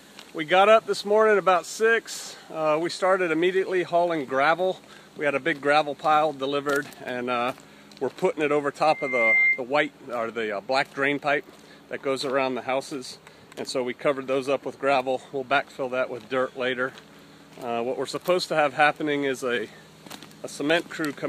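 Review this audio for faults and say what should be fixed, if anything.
Loudspeaker feedback squeal, 8.85 to 9.62 s: a single 2.1 kHz tone swells over about half a second to about 5 dB above the sound. The microphone is picking up its own loudspeaker, and loop gain at that frequency exceeds one. Unlike an interference whistle, which starts at full level, this tone grows from nothing.

To prevent it, move the microphone out of the loudspeaker's coverage, lower the monitor gain, or notch 2.1 kHz so the loop gain stays below one.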